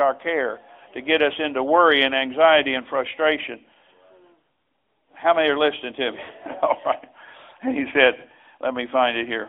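Thin, buzzy and synthetic from start to finish, the speech is confined to a narrow band of roughly 300 Hz to 3.5 kHz, with no air or depth at either end. This is the AMR narrowband mobile codec. Rather than storing the waveform, it rebuilds each stretch from a vocal-tract model excited by sparse pulses. Its damage is plainly audible here, and the grainy, processed edge fits a mid-range rate near 10.2 kbps.

From 6.24 to 6.30 s there is a brief smeared wobble, a dip where the sound briefly holds and sags before the speech snaps back slightly rough. These are lost AMR speech frames. About 40 ms failed to arrive intact, which fits two consecutive 20 ms frames, so the decoder filled the hole by repeating its last good pitch and spectral settings at decaying gain. The gap was too short to fade fully to silence.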